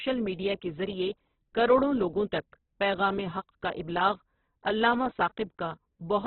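Across the whole speech clip, heavy Opus compression damage is audible, likely from encoding at a very low bitrate, which fits a setting near 8 kbps. Nothing is present above about 4.1 kHz, giving a narrowband, boxed-in sound. With too few bits, the encoder fills bands with folded or noise-like content, so the speech turns grainy and rough. That graininess, with less watery swirl and fewer patchy spectral holes, separates it from heavy MP3 damage.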